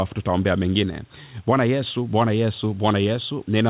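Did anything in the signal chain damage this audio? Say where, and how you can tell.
No, nothing in this speech recording stood out as damage on listening.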